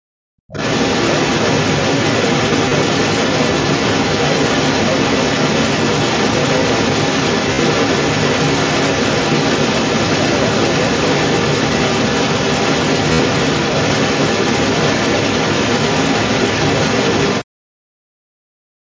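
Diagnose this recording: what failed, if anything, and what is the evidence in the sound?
At the start of the recording, the call processing gated the background through the echo canceller. From 0.0 to 0.47 s, roughly half a second, the room tone sinks by about 37 dB and then returns when the canceller releases. On a waveform the noise floor pinches down to nearly flat at the head of the file. A spectrogram shows a dark vertical band across all frequencies before the normal background texture fills back in.

From 0.47 s to 17.45 s a second voice leaks through underneath the talker. It sits roughly 10 dB below the main speech. The likely cause is the far side playing out of the talker's loudspeaker, with the echo canceller failing to remove all of it from the microphone. On the spectrogram this shows as a fainter, independent set of harmonic striations under the main talker, sometimes broken into fragments.

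Concealed Bluetooth headset packet loss appears on the headset-to-phone link, in the mSBC codec stage. The band otherwise runs cleanly up to 8 kHz. The losses sit at 2.69 to 2.71 s (22.5 ms), 7.53 to 7.59 s (52.5 ms) and 13.13 to 13.19 s (60 ms). The longer two turn into a brief buzzy, level-held tone with a small warble as real audio resumes. On a spectrogram, repeated identical slices form a short smeared comb. The lengths fit runs of several 7.5 ms frames.

Speech is suppressed in double talk near the end, from 17.45 to 18.02 s and from 18.47 to 18.86 s. The talker's voice drops by roughly 40 dB. The likely cause is the echo canceller, which could not tell near speech from loudspeaker echo while both sides talked and so attenuated both. The waveform envelope collapses abruptly in these stretches. On the spectrogram these stretches go dark.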